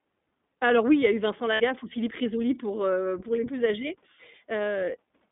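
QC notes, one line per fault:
throughout, iLBC codec: everything above 3.6 kHz and below 200 Hz is gone, and the speech has a plainly rough, slightly synthetic edge, which fits iLBC at 15.2 kbps.
1.54–1.62 s, lost iLBC frames: about 60 ms is filled by a held, buzzy repeat of the last pitch cycle, which fits three lost 20 ms frames. Unlike a plain dropout, there's no silence, and the voice returns almost immediately.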